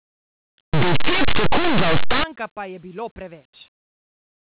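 From 0.73 to 2.24 s, linear audio read as companded: 8-bit samples decoded as mu-law give very loud, harsh distortion and broadband spectrogram smear.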